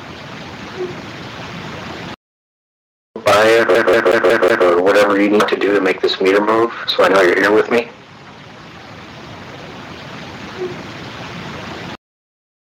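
From 3.75 to 4.67 s the audio locks into the stutter of a CD stuck on one turn: the same 0.18 s fragment plays five times, each jump marked by a brief mute. The even, fixed loop length separates it from irregular dropouts or buffer glitches.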